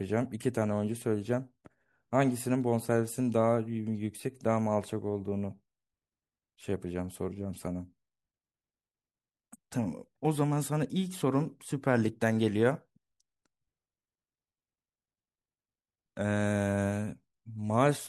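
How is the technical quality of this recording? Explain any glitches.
Nothing here jumps out as a glitch; the recording runs along without any technical hiccups to point to.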